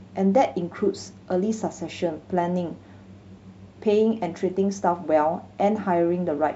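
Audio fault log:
No fault is heard in this speech clip.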